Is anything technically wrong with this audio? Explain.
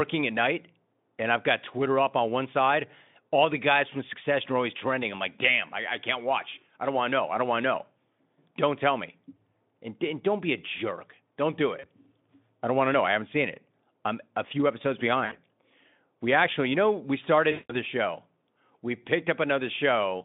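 Yes. VoIP packet loss concealed by the speech codec hits the speech three times: a 40 ms gap at 11.79 s, 60 ms at 15.25 s right after "I'm a few episodes", and 180 ms at 17.51 to 17.74 s between "actually you know we" and "show we". The decoder fills each missing stretch by repeating its last pitch and filter at falling gain, so the sound smears into a brief buzzy tone or coloured noise that fades. The longest gap fits about nine 20 ms frames, and the voice stays weak or distorted for tens of milliseconds or more past it. On a spectrogram, each gap shows a frozen pattern that dims instead of changing with the speech. On the waveform, it looks like a decaying envelope. Around these gaps, the Speex line is band-limited to roughly 150 Hz to 3.6 kHz, and the stream runs near 18 kbps.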